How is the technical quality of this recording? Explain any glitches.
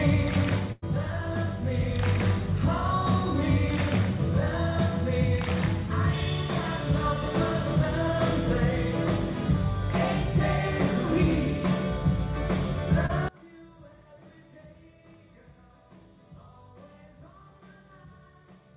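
The recording has three clear faults: two dropouts and, near the end, a large collapse in level. It is also band-limited throughout, with nothing above 4 kHz, as expected from a G.711 mu-law call path at around 64 kbps.

Burst of packet loss, 0.72 to 0.84 s. About 100 ms of audio never arrived in time. The receiver continued the last sound for roughly that long, fading it, and then playback resumed further on, so about 100 ms of the original is missing. It sounds like a brief held buzz or fading hiss followed by a jump. On a spectrogram it appears as smeared, repeating harmonics or flat noise that fade out. On the waveform it is a decaying, overly regular stretch with no silence.

Short concealed packet loss, 13.06 to 13.11 s. A much smaller hole, about 20 ms, was lost. The decoder synthesised about 29 ms from the preceding sound and then blended back into the real signal. It is audible as a quick smear or wobble. 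On a spectrogram it is a thin vertical blur where detail briefly repeats. On the waveform it shows a short continued stretch and a slight seam.

One channel inverted, 13.28 s to the end. Here the level drops by about 27 dB, and what remains sounds faint. The likely cause is one stereo channel having reversed polarity: content common to both channels cancels when they are summed to mono, leaving only their difference. On a spectrogram the energy falls away abruptly. On the waveform the amplitude shrinks sharply and stays small until the end.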